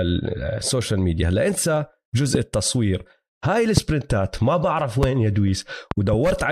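Loud pops land at 2.35–2.37, 3.77–3.80 and 5.03–5.06 s, with a double pop spread over 5.91–6.16 s. Each is a sharp thump roughly 15 dB above the speech, which continues underneath. The likely cause is a brief voltage spike, such as static or a switching glitch, entering the signal chain.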